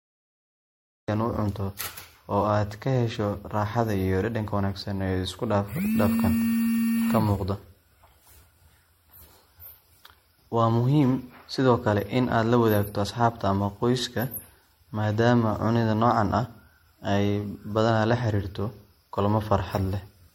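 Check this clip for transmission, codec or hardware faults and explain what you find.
Two faults stand out: a cut-off start and generation loss.

From 0 to 1.08 s there is pure digital silence. At 1.08 s the speech bursts in mid-sound with no attack or fade. This is a cut-off start: the recording or stream began late.

Throughout, the speech sounds swirly, smeared and hollow, with blurred attacks and nothing above 16.6 kHz. This is generation loss, likely from several rounds of lossy MP3 coding around 60 kbit/s, each pass adding its own noise and spectral holes.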